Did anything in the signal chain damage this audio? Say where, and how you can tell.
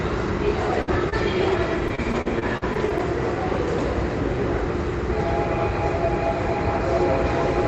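Yes, at the network stage: repeated packet loss (robotic sound) from 0.82 to 3.01 s. Eleven short holes, the longest 57 ms, were patched by stretching prior sound, giving choppy sound with pieces missing rather than clean dropouts.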